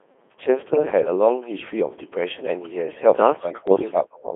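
A speech recording carried over a Codec 2 vocoder, confined to roughly 250 Hz to 3.5 kHz. The voice is rebuilt from sine waves using only pitch, voicing, energy and envelope, so it sounds heavily robotic and buzzy, consistent with the 2.4 kbit/s mode. Bit errors on digital voice radio appear at 0.74 to 0.83 s and 3.68 to 3.92 s. Corrupted frame parameters make the synthetic voice jump in pitch, level and tone into warbling gibberish, which fits a few percent of bits flipped across about two and nine frames.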